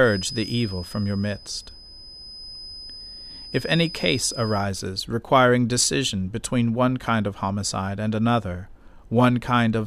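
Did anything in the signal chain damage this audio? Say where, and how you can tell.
Yes. A feedback whistle sits under the speech from 0 to 4.7 s, a steady 5 kHz tone roughly 15 dB down, ending before "requiring decision between one". Likely an acoustic loudspeaker-to-microphone loop held just below runaway.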